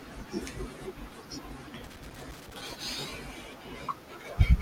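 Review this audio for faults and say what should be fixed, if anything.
From 1.84 s to 2.84 s the speech is broken by an irregular burst of crackle and scratching lasting about a second, with the signal chopped into fragments. This is loose connector crackle: a worn or dirty contact in the signal path repeatedly makes and breaks as it shifts, cutting the audio on and off, while any DC present on the line turns each break into a pop. To prevent it, clean or replace the affected connector and secure the cable so it cannot move during recording.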